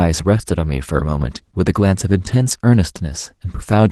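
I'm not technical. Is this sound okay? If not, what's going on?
No. Opus voice compression affects the speech from start to finish. To save data, the encoder rebuilds the speech from a rough model of the voice, plus a thin layer for the high frequencies, so the speech sounds hoarse, muffled and faintly robotic throughout.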